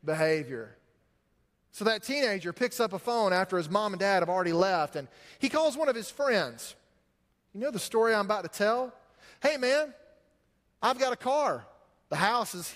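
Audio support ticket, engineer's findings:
No faults found on listening; nothing to attribute to any component in the chain.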